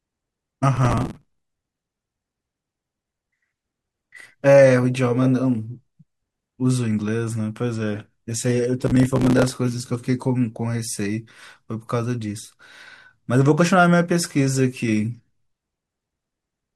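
Two bursts of gritty, tearing crackle sit on top of the speech, from 0.77 to 1.57 s and again from 8.86 to 9.56 s, then stop cleanly. This is processor overload crackle. The processor missed its deadlines again and again, and each time a short stretch of old audio was replayed with hard edges. The grain of the tearing points to buffers of roughly 5 ms, with dozens of them missed in each burst.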